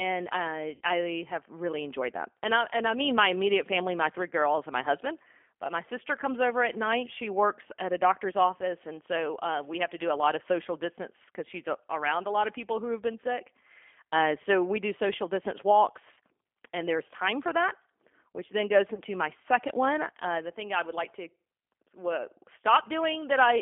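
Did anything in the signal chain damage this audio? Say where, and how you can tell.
Yes. The G.729 codec damaged the whole clip at the codec stage. The speech is confined to roughly 300 Hz to 3.4 kHz and sounds rough and slightly synthetic throughout. That texture fits an 8 kbit/s coder rebuilding the voice from a filter, pitch predictor and sparse pulses.

Network packet loss, concealed by the speech codec, causes three brief faults. At 0.75 to 0.81 s, before "I have really enjoyed", about 60 ms of audio was lost. Two more gaps of about 30 ms occur at 16.14 to 16.19 s, between "we do social distance" and "and there's time for", and at 18.94 to 19.01 s, between "that which then goes" and "my second one". Each gap becomes a short buzzy tone or coloured noise that fades as the decoder stretches its last pitch and filter.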